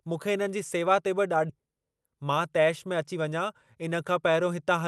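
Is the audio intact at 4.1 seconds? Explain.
Yes, the speech at 4.1 seconds is intact, with no dropout, glitch or other fault at that moment, only the ordinary character of the call codec path, whose bandwidth tops out around 12 kHz.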